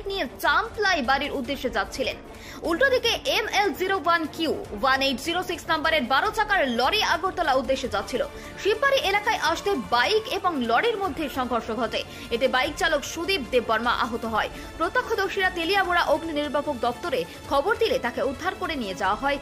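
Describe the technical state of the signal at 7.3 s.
At 7.3 s the signal is intact, with no dropout, distortion, glitch or other technical fault to be heard.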